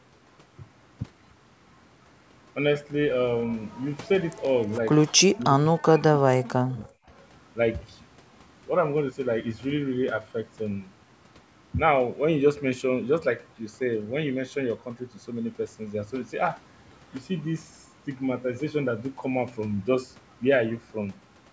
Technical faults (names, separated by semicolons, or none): echo leak; speech suppressed in double talk